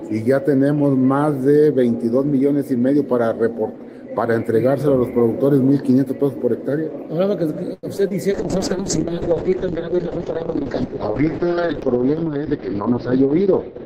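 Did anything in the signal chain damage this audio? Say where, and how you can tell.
Yes. At 7.73 s there is a short stall from a late packet, a network and jitter-buffer fault. For about 97 ms, until 7.85 s, the receiver ran out of audio and held the last sound. Then it resumed from the same point, so nothing is lost but the timing slips by roughly that amount. On a spectrogram, the harmonics run flat and frozen across that span. The waveform shows a repeating, slightly buzzy cycle.

Right after, there is short concealed packet loss at 7.97 s and 8.09 s, also a network fault handled by the decoder. Each time about 20 ms of audio never arrived. The receiver extrapolated from the preceding sound, for around 10 ms and 18 ms respectively, then crossfaded back. You hear a brief smear or wobble. A spectrogram shows a blurred, slightly smoothed sliver where fine detail should be, and the waveform has a soft seam at each join.

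From 8.34 s to the end there is a call bitrate drop, a codec fault driven by the network. The bandwidth estimate collapsed and the encoder fell from 32 kbps to 6 kbps. At that rate Opus narrows the coded band from 20 kHz to 6 kHz, so the sound turns muffled and watery. On a spectrogram, everything above 6 kHz goes abruptly empty at 8.34 s. The remaining band looks blocky and smeared.

Between 12.22 s and 13.49 s a jitter buffer speed-up runs, a buffer-management stage. Excess buffered audio was trimmed by cutting out pitch-period-sized pieces repeatedly, about a tenth of a second in total. Playback runs at about 107% speed with unchanged pitch, so it sounds slightly hurried. The spectrogram shows events packed closer together without any frequency shift. The waveform has small splices where cycles were dropped.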